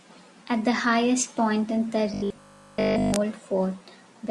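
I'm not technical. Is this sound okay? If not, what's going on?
No. From 2.14 to 3.16 s there's robotic sound from repeated short buffers: a rigid 50 Hz metallic buzz, likely from tiny 20 ms snippets looping, rather than silent gaps or crackle.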